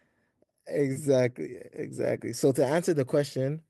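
Listening to the speech recording, nothing technically wrong stood out at any point.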